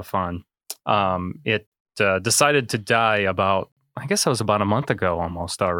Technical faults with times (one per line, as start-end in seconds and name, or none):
1.67-1.72 gap between chunks
3.72-3.77 gap between chunks